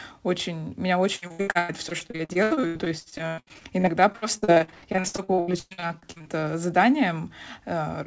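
From 1.16 s to 6.44 s, just after "очень меня", the speech turns choppy and robotic, with a stuttering quality and pieces missing. This is repeated packet loss: more than fifty holes open over the stretch, the longest about 118 ms, and each is patched by stretching the last bit of sound before the next one arrives. The patching covers about 40 percent of the span. The call path's band limit at 8 kHz, which fits a G.722 codec, holds throughout.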